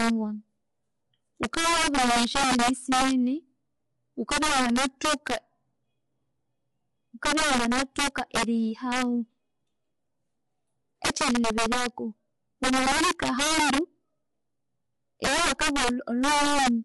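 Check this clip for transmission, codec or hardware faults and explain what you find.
Two faults are present: integer overflow on loud passages and low-delay AAC compression throughout.

Integer overflow occurs at 0.00–0.10, 1.43–3.11, 4.32–5.36, 7.25–8.43, 8.92–9.02, 11.05–11.86, 12.64–13.78 and 15.24–16.68 s. Peaks driven about 2 to 10 dB past full scale wrap to the opposite sign instead of limiting, producing violent cracks far harsher than clipping.

Low-delay AAC compression runs throughout the speech, likely AAC-ELD at a low rate consistent with 32 kbps. Its short frames resolve pitch harmonics poorly, so the voice sounds rough and grainy, with noise filling the gaps between harmonics and a thin, synthetic-sounding top band.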